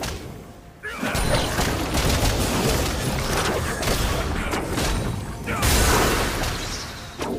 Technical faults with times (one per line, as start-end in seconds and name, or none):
none